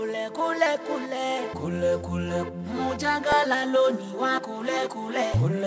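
At 3.32 s there is an underrun with held sample: the output buffer briefly ran dry, and the converter froze on its last value for about 0.73 ms, which fits a stall of roughly 32 samples. The waveform goes flat, so there is almost no click. Since essentially no audio was lost, playback resumes where it paused and the join is soft. The G.722 call path keeps everything below 8 kHz.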